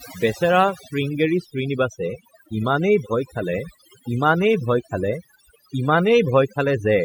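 Overdone noise removal runs throughout. Bands near the noise estimate are cut away, leaving silent gaps with twinkling specks and taking quiet parts of the speech with them.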